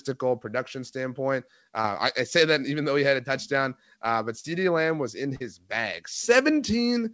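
Short concealed packet loss occurs at 1.82 s after "production standpoint", 4.40 s after "a touchdown uh but" and 5.36 s after "was in". Gaps of 20 to 40 ms went missing, and the receiver extrapolated the preceding speech and then crossfaded back. Each is heard as a brief smear or wobble in speech that is band-limited to 8 kHz.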